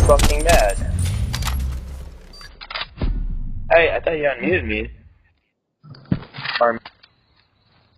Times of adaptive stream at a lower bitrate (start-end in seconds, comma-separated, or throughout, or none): 2.49-7.97